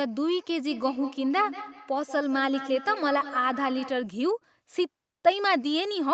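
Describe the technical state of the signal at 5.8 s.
At 5.8 s the speech is intact, with no dropout, glitch or distortion; it simply carries the call path's normal band limit, with nothing above about 8 kHz.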